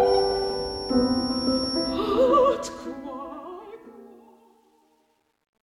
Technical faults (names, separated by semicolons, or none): feedback whistle; truncation distortion on a fade